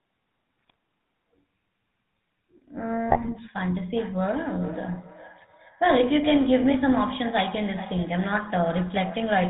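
GSM full-rate codec coding runs throughout: the pulse-driven vocal-tract model and nothing above 4 kHz leave the speech plainly buzzy and gravelly, consistent with a 13 kbps stream. GSM bit errors strike at 0.59–0.74 s and again at 3.08–3.37 s, where corrupted filter, pitch or gain values distort frames into squawks, pops and gargling. Feedback echo between two devices starts at 3.96 s and lasts to the end: a second device's loudspeaker feeds back into the microphone, returning the speech roughly every 0.4 s, thinner and ringing, peaking about 17 dB below the direct speech.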